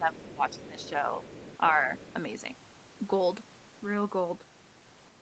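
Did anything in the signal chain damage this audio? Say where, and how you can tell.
Yes. In the call processing stage, the first 1.1 s shows speech suppressed in double talk. The talker's level dips repeatedly, by about 10 dB at the deepest, for roughly 0.7 s in total. On a waveform the envelope is gouged in uneven notches. On a spectrogram the harmonics fade in patches. This is likely the echo canceller failing to separate near-end speech from loudspeaker echo and attenuating both together.

The other side's voice leaking through shows as brief scraps at 0.49 s and 0.80 s, then longer stretches from 1.23 to 1.58 s and 1.98 to 2.14 s, sitting roughly 20 to 25 dB under the talker. A spectrogram shows a faint second harmonic stack whose pitch and timing don't follow the main voice, and on the waveform it appears as low-level energy in gaps. Residual echo is the likely cause, with the canceller leaving part of the far end in the microphone signal. 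The band limit near 8 kHz belongs to the call path and the Opus codec.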